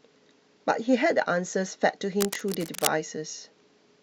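A speech clip with a burst of cable scratch noise from about 2.17 to 2.88 s, a dense, uneven scratching and rustling sitting on top of the voice at roughly 5 dB under it. It's likely a worn cable or connector being moved, its contact resistance jumping around.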